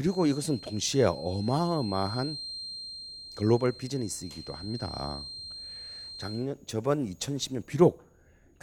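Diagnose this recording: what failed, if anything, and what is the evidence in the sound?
A feedback whistle runs under the speech from 0.00 to 6.49 s, then stops. It is a thin, steady tone at 4.2 kHz, around 15 dB below the speech, and its level swells and fades slowly. The stage is the acoustic path ahead of the converter. The likely cause is loudspeaker output reaching the microphone with loop gain just under the runaway point. One frequency keeps recirculating and sustains without building up.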